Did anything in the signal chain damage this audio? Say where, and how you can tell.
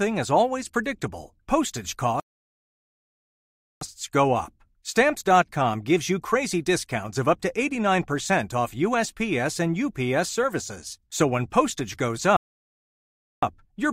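Yes. At the playback stage, the player most likely ran short of data or had its output thread held up, so nothing reached the output until it caught up. That is a playback stall: the speech cuts to silence mid-flow from 2.20 to 3.81 s, about 1.6 s, and again from 12.37 to 13.43 s, about 1.06 s. Each gap is a clean dropout to silence rather than noise or distortion, and the speech carries on once output resumes.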